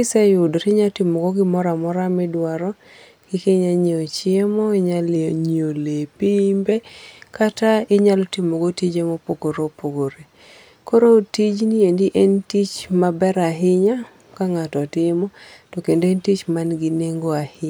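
From 5.16 to 6.72 s the speech suddenly sags: it slows by about 5.4% and drops in pitch by roughly 97 cents, nearly a full semitone. Then it snaps back to normal. That's the signature of a drift correction step. Speed and pitch move together and switch on and off abruptly, so the likely culprit is clock-matching software that shifted the playback rate in one jump to rebalance its buffer.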